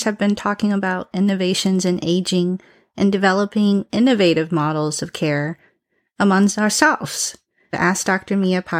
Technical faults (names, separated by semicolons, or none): none